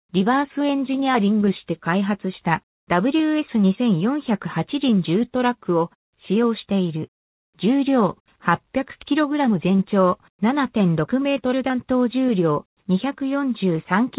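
No technical faults can be heard anywhere in the clip. It has passed through a working call path whose G.711 mu-law coding leaves nothing above 4 kHz, so the sound has the narrow, telephone-band quality of a standard phone line.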